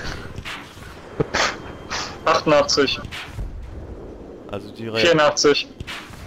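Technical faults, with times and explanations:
No technical faults can be heard anywhere in this audio.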